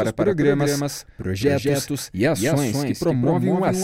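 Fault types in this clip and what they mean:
Doubled audio track: a full-band copy trails about a fifth of a second behind throughout, roughly 5 dB quieter, likely from a second capture path; spectrograms show every onset repeated.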